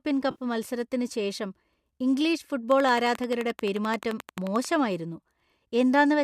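AAC frame loss with concealment appears from 0.31 to 0.42 s. About 70 ms of coded audio, which fits roughly seven lost frames, was rebuilt by the decoder from the last good spectrum. The speech there turns briefly smeared and noisy.

A train of clicks runs from 2.72 to 4.66 s: about twenty near-identical pulses at a regular 11.4 per second, standing roughly 10 dB above the speech. Their likely source is electrical interference or a faulty connection.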